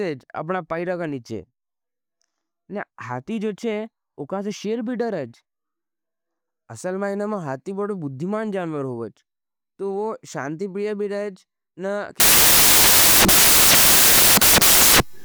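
From 12.2 s to the end of the speech clip, samples are built from the wrong bytes. Each sample's bytes are combined incorrectly, so the rapidly changing low bits become the dominant part of each value. The result is loud, harsh broadband noise.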